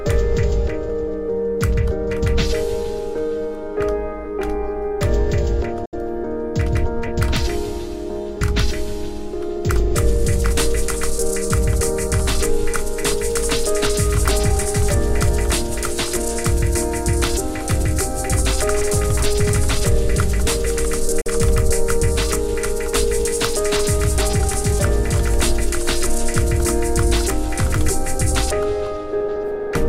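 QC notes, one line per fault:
5.85–5.94 s and 21.21–21.27 s, Bluetooth dropout: silences of about 85 ms and 55 ms, likely lost wireless packets, after which the sound resumes further along as if it had kept playing. Unlike a gap that pauses and resumes where it stopped, material is skipped.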